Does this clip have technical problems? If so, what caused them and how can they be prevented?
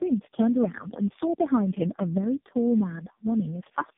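Yes. Throughout the speech there's tandem speech coding: it sounds like three low-rate AMR-NB passes, with decode and re-encode at each link, each one roughening the last. The result is rough, muffled and warbly, with nothing above 3.7 kHz. Keep the call end to end in a single codec (transcoder-free operation) so it's encoded only once.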